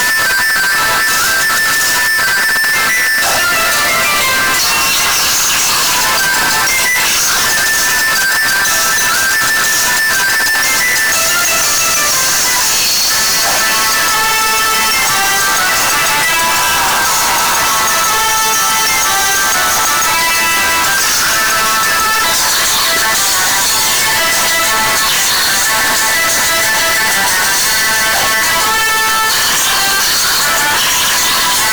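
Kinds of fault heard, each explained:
Float read as integer: The whole clip sits at a nearly fixed, high level with a squared-off waveform, and background noise comes through as loud as the main sound, though pitch can still be followed. Likely cause: 32-bit float samples read as 32-bit integers, so sign and exponent bits set the level.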